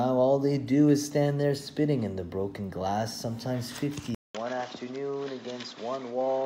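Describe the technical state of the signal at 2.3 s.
At 2.3 s the signal is intact, with no dropout, clipping, glitch or other fault audible at that moment.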